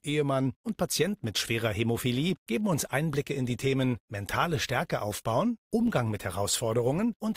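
Adaptive stream at a lower bitrate, from 3.14 s to the end of this speech clip: the quality changes abruptly and codec artefacts rise with no gap, as the player switched to a cheaper encoding when the connection slowed, which fits Opus dropping from 64 to 32 kbit/s.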